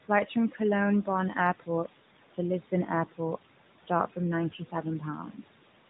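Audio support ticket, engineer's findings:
Noise suppressor artifacts, whole clip: background pumps down about 18 dB in the gaps and climbs back under the talking. Probable component is the call's noise suppressor gating bands it reads as steady noise, frame by frame.

Side note: the artifacts are the suppressor, not the light AMR narrowband encode underneath, which just caps everything at 4 kHz.

Speech cut by the noise suppressor, 0.05–0.6 s: onset sounds swallowed, dipping as much as about 16 dB, only a brief slice, maybe a tenth or two of a second in total. Suppressor misread the soft start as noise and ducked it with the background.

Speech cut by the noise suppressor, 4.5–5.48 s: same thing near the end, longer stretch, close to half a second faint overall, drops of about 13 dB. Quiet tail and endings treated as noise floor and pulled down.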